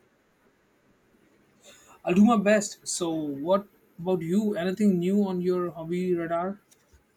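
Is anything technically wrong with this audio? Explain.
Yes, there's one small fault. Right after "new on your hobby", at 6.45 s, there's a single sharp click. It's most likely dropped samples: a sample or so goes missing, the waveform jumps straight to a later value, and that step comes out as a brief click.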